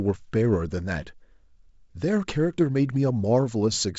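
Nothing stood out on listening to this speech clip.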